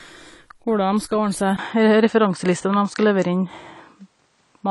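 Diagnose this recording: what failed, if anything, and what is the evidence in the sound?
The codec stage has damaged the whole clip. Nothing reaches above about 11.4 kHz, and the speech sounds dull and smeared, with a fizzy, warbling edge on sibilants and sustained vowels. This is likely AAC compression (AAC-LC) at a low rate, with the lowered cut-off and coarse quantisation pointing to something near 32 kbps. At that rate the encoder runs short of bits, so it discards the top band and quantises the remaining frequency lines coarsely. The texture changes from frame to frame, which produces the artefacts.

A capture-stage fault begins at 1.57 s. A gap of about 20 ms is followed by audio that is noticeably narrower and has lost everything above about 8.9 kHz. The level shifts by a few decibels and a faint new noise floor appears, well below the speech. This pattern matches an input switched to a poorer device. 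The system most plausibly changed microphones mid-recording, and the new device has less bandwidth, a different gain and its own noise. The narrower sound continues to the end of the clip.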